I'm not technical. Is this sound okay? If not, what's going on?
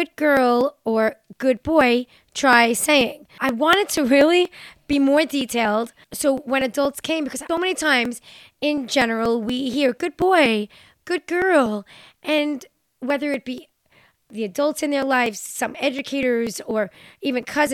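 No. Periodic USB or driver dropouts run from 0.13 to 17.67 s: every 0.24 s, something briefly stalls the audio connection, skipping around a hundredth of a second of speech and leaving a regular tick.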